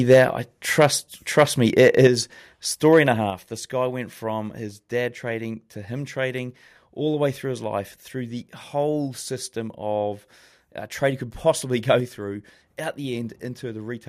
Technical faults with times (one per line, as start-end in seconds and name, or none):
0.10-0.17 microphone overload
0.14 microphone volume stepped down
0.79-0.86 microphone overload
1.38-1.44 microphone overload
1.79-2.07 microphone overload
2.07 microphone volume stepped down
2.85-2.98 microphone overload
3.30 microphone volume stepped down
12.00 microphone volume stepped down